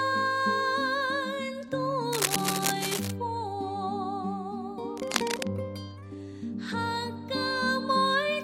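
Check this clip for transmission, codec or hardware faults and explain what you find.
Two bursts of cable scratch noise occur, from 2.13 to 3.13 s and from 4.95 to 5.48 s. Both are dense, uneven rustling laid over the sound. The first lasts about a second and is roughly as loud as the sound itself. The second is shorter and sits somewhat below it. The likely cause is a worn cable, connector or control carrying DC being moved, so its contact resistance fluctuates rapidly and injects the noise.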